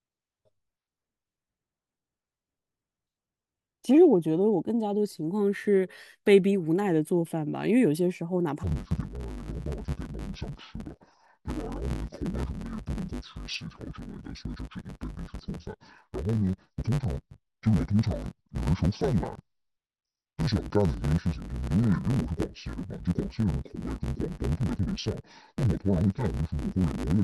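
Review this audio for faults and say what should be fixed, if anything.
From 8.63 s to the end at 27.23 s, the speech turns dull and robotic with a steady buzz at about 100 Hz: interleaved audio read as planar. Each 10 ms block's alternating left-right samples are split into halves, smearing both channels. Fix it by declaring the buffer layout explicitly and checking interleaved versus planar at every handoff.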